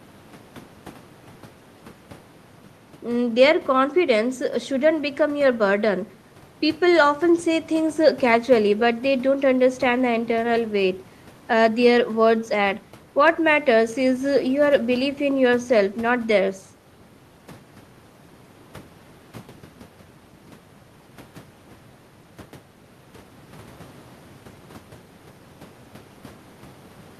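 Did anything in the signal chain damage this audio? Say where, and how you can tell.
No, nothing in the signal chain has audibly damaged this speech recording, and the signal stays continuous and intact throughout.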